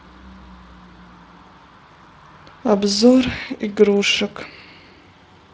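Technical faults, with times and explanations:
No technical faults are present; the speech is carried over a Speex path at what sounds like a fairly high quality setting, consistent with a rate of around 24 kbps, leaving only a light coded texture on the signal.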